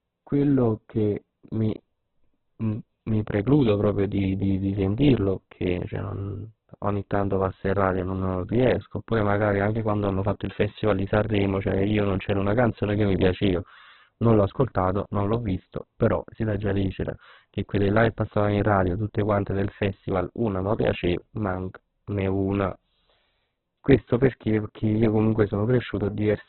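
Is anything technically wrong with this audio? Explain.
Yes. Throughout the speech there is heavy Opus compression damage, likely from an encode at a very low rate near 8 kbps. Nothing remains above 4.4 kHz, so the sound is narrowband and muffled. With too few bits, bands are filled with folded or noise content, leaving a rough, grainy texture.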